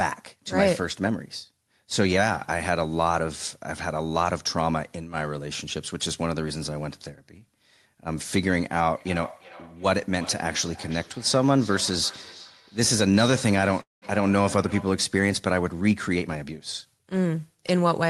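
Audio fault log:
8.96–15.08 s, feedback echo between two devices: a second device in the room replays this audio and its microphone feeds it back, so the sound returns at a fixed spacing of roughly 400 ms, thinner and more ringing each pass, peaking at about 19 dB below the main level. Each device's echo canceller only removes its own playback, so nothing cancels the copy. The steady repeat interval separates it from room reverberation, which smears rather than repeating.
13.81–14.05 s, call audio freeze: the sound stops being fed for about 205 ms and the gap is filled by a brief continuation of the last sound that fades into roughly 160 ms of silence. When the audio resumes it picks up exactly where it stopped with nothing lost, and playback is now running about 205 ms later. The likely cause is delayed packets draining the jitter buffer. Unlike a dropout, no sound goes missing.
16.15–17.34 s, jitter buffer speed-up: the audio runs about 115% of normal speed while pitch stays unchanged, because the receiver repeatedly trims short pitch-period slices, around 200 ms in total, to shrink an overfull buffer. 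The speech sounds hurried rather than higher. That unchanged pitch distinguishes it from a sample-rate mismatch, where speed and pitch rise together.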